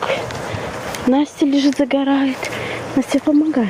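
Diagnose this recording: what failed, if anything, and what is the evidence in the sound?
Gain pumping runs throughout: the input gain at the analogue front end is set far too high, likely with a fast limiter clamping each loud sound. The gain swings about 15 dB between loud moments and the gaps, squashing loud and soft together.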